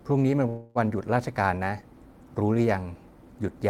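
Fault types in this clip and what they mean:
Call audio freeze: at 0.49 s the speech stops moving forward and the last sound is stretched into a fading buzz that fills about 258 ms, with no true silence, before the talker resumes at 0.78 s exactly where they left off. Unlike a packet-loss dropout, nothing is cut out; the speech is simply pushed later by that same 258 ms, likely because delayed packets left the jitter buffer briefly empty.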